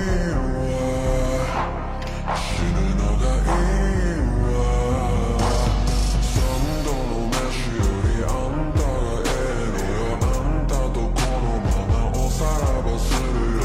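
Nothing in the recording stood out as a technical problem on listening.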